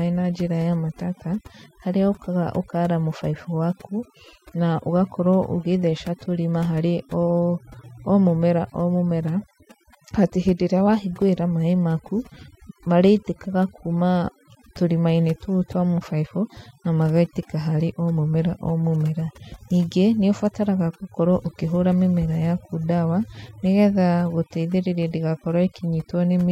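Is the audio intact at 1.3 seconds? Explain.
No, overdone noise removal runs through the whole clip, including 1.3 s: over-strong reduction cuts bands near the noise floor, leaving a dropped background that breaks up into twinkling specks.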